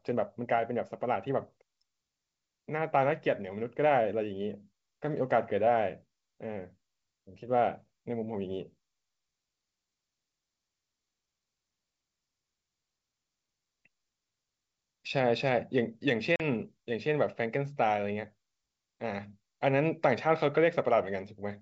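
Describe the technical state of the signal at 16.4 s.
At 16.36 s the signal drops out in a packet loss on an ADPCM call, a silent gap ending at 16.42 s in which about 40 ms of audio, roughly a couple of packets, never arrived. The waveform shows a flat, hard-edged hole, and the spectrogram an empty vertical band. When speech resumes, the decoder's predictor and step size no longer match the sender's, so the onset can click or sound distorted for some tens of milliseconds.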